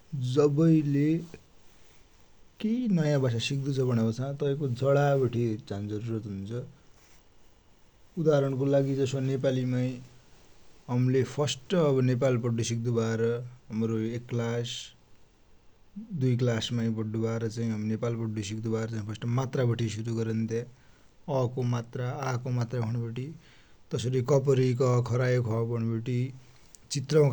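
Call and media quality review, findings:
No audible faults found in the speech signal; level, continuity and timing hold steady throughout, with nothing to flag against any playback or transmission component.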